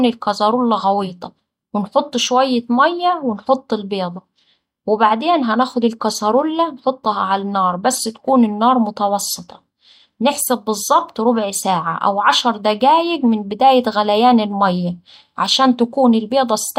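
No technical faults are audible.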